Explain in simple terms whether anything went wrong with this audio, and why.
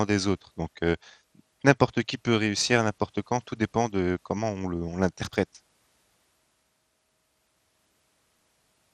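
The speech sounds dull and gurgly throughout, with a grainy edge. That is likely MP2 compression. It switched off the treble to save space.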